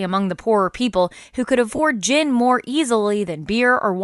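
From start to finish the speech carries a breathy, grainy edge, with a hiss-like texture where the upper harmonics should be. The codec damage is plainly audible. The likely cause is Bluetooth LC3 compression, the LE Audio transform codec. At a modest rate it discards much of the upper spectrum and fills the gaps with shaped noise, and the degree of roughness here fits a bitrate around 48 kbps with 10 ms frames.

At 1.76 to 1.79 s there is a brief break of about 30 ms where the speech turns into a short noisy smear instead of clean continuation. These are lost LE Audio frames, and the length fits three consecutive 10 ms frames going missing. The decoder covered the gap by repeating the last received spectrum with randomised signs. That keeps the level roughly steady but destroys the waveform detail, leaving a blurred, hissy patch before normal decoding resumes.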